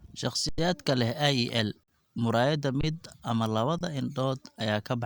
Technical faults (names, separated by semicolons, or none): underrun with held sample